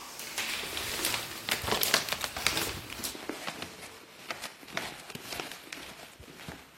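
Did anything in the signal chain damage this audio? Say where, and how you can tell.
Yes. At 3.11 s the sound shifts abruptly to a lower-bitrate version of the adaptive stream and stays there to the end. The stage is network-driven codec switching. The connection slowed, and the player swapped to a leaner encoding with no gap. From that point the treble turns thin, with swirly codec artefacts. The character fits a move from high-rate AAC-LC to HE-AAC at around 20 kbit/s. On a spectrogram, content above 14.9 kHz cuts off sharply at 3.11 s, and the upper band looks smeared and patchy. The waveform stays continuous.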